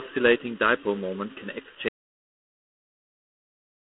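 Speech, marred by two faults. Throughout, channel delay (comb filtering): one channel trails the other by under a millisecond, so the mono sum cuts fixed, evenly spaced notches from around 700 Hz upward, giving a hollow, phasey tone rather than the smooth dullness of simple treble loss. At 1.89 s, right after "dipole moment can", an audio dropout to silence begins and runs to the end. The gap is silent with no room tone, unlike a noise gate or fade, most likely from a lost input while recording continued.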